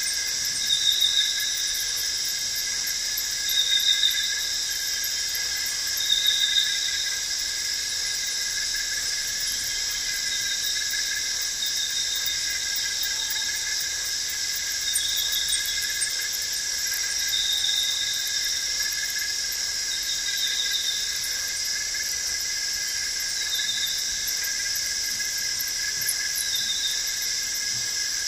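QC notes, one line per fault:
14.35 s, block of digital silence: a single sharp tick as the sound drops to silence for about 2.7 ms and returns abruptly. The hard edges on both sides make the click, and the gap's length fits one unfilled 128-sample output buffer.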